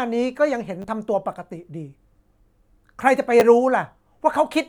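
At 0.82 to 0.84 s and at 3.40 s, repeated buffer faults occur. A 10 ms piece replays, twice then once, heard as brief clicks.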